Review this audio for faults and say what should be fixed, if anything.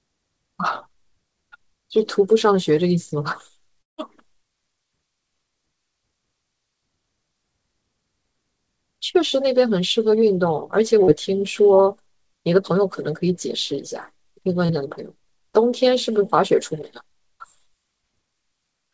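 Long network dropout, 3.82 to 4.00 s: the last sound trails off into a fading buzz and then near-silence before audio resumes, with about 160 ms likely lost in transit and never played.

Short concealed packet loss, 11.04 to 11.10 s and 14.66 to 14.71 s: each time about 40 ms of audio missed the decoder, and the receiver extended the preceding sound to cover it, leaving a brief smear.

To prevent both, stabilise the network link and give the jitter buffer more headroom, adding forward error correction so isolated lost packets can be rebuilt rather than guessed.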